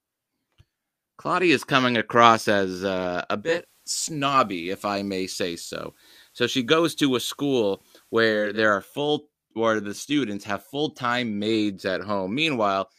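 Digital radio blending to analogue, 3.34 to 8.62 s: the receiver lost digital reception and cross-faded over 358 ms to FM, adding hiss about 35 dB down.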